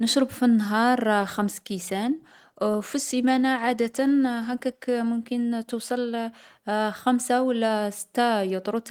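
Speech with a call bitrate drop from 1.22 s to 6.17 s: the encoder gets far fewer bits, so the voice turns coarse and rough, with the roughness at its worst for about 3.6 s, consistent with the rate halving from about 32 to 16 kbps. Unlike packet loss, the sound never breaks into gaps or glitches, and unlike a plain filter, the texture itself degrades, then clears once the rate recovers.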